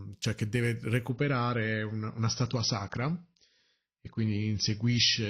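From 1.10 s to the end, an adaptive stream at a lower bitrate takes over: nothing above 6 kHz, swirly artefacts, consistent with a drop to roughly 24 kbit/s.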